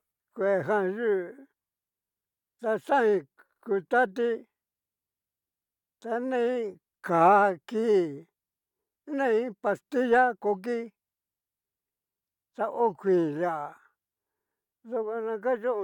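No audible faults turn up anywhere in this speech recording.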